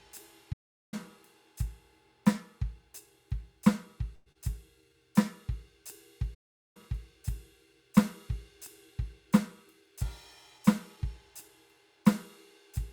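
A music recording, interrupted twice by a playback stall: the sound drops to silence from 0.52 to 0.94 s and from 6.34 to 6.77 s, about 0.4 s each, then resumes where it stopped, likely because the player ran short of data. A call audio freeze from 4.15 to 4.29 s is different: instead of silence, the last sound is stretched into a fading buzz or hiss for 106 ms, likely because the jitter buffer ran dry. Nothing is lost, so the music simply runs late afterwards. Just after it, at 4.32 to 4.38 s, a short concealed packet loss is a quick smear: 29 ms of synthesized fill covers 60 ms of music that never arrived, so material really is missing, and the playback delay shrinks by roughly 30 ms. Two jitter buffer speed-ups follow, at 9.68 to 10.09 s (109% speed, roughly 40 ms cut) and 10.51 to 11.49 s (105%, roughly 50 ms cut). Pitch holds steady while the tempo rushes, because whole pitch periods are dropped rather than the playback being sped up.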